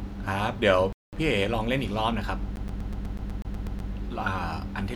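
From 0.93 to 1.13 s the speech drops to about 200 ms of silence, then resumes; a Bluetooth stall is the likely cause, with the headphone buffer running dry. From 2.56 to 3.91 s a CD stuck on one turn repeats the same 123 ms segment eleven times, with a brief mute at each laser jump.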